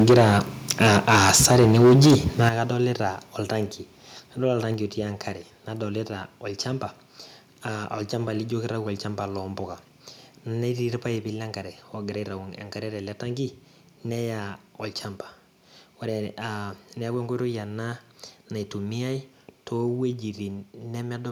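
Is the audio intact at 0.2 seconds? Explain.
No. From 0.0 to 0.38 s the speech has a harsh, crackling, flattened edge, with a sizeable share of the waveform sheared off at its peaks. This is microphone overload, likely from input gain driving the signal about 10 dB past the converter's ceiling.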